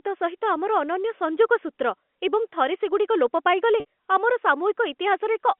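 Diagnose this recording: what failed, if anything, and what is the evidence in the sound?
Packet loss with pitch repetition at 3.8 s (network): about 60 ms was lost, and repeating the last pitch period bridged it as a brief buzzy hold.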